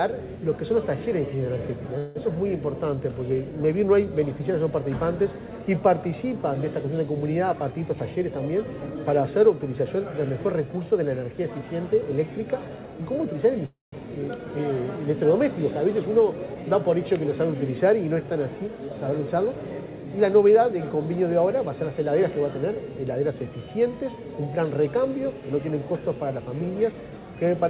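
At 1.98 s the sound stalls for about 0.17 s as the last moment is stretched into a fading buzz. This is a call audio freeze, likely from packets held up until the jitter buffer ran empty. Unlike a dropout, nothing is lost and playback resumes exactly where it stopped.

From 7.53 to 8.95 s a jitter buffer speed-up runs the audio at 112% while the pitch stays put. Repeated pitch-period-sized cuts, roughly a fifth of a second in total, trim the built-up delay, so it sounds hurried rather than chipmunk-shifted.

The second call audio freeze, at 13.66 to 13.94 s, holds for about 0.27 s. This time the buzz dies away into roughly 0.15 s of silence before the audio picks up intact.

Two more speed-ups follow. From 16.03 to 16.98 s the playback rate is 108%, shedding around a tenth of a second. From 18.65 to 19.82 s it is 115%, shedding roughly 0.2 s. Each one rushes the timing without raising the pitch.

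Throughout, the 64 kbps G.711 mu-law call path leaves nothing above 4 kHz.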